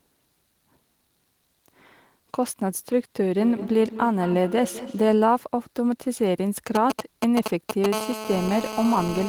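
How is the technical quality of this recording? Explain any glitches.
The recording has three clear faults: an acoustic loop between two devices, then interference from a nearby 2G phone in two distinct forms.

From 3.23 to 5.24 s there is feedback echo between two devices. A second device in the room replays the call audio into the microphone, beyond the reach of the echo canceller. The speech returns at roughly a fifth-of-a-second interval, peaking about 13 dB below the direct sound, with a thin, ringing quality.

From 6.75 to 7.86 s come GSM signalling bursts. A nearby phone is exchanging short control transmissions with the network, and the audio circuitry rectifies the radio pulses. The result is a galloping pattern of brief 217 Hz buzzes, nearly as loud as the speech.

From 7.93 s to the end of the clip there is GSM phone buzz. The same phone is now on an active call, transmitting continuously at 217 bursts per second. 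This produces a steady, raspy 217 Hz buzz rich in harmonics, about 10 dB below the speech and unrelated to it.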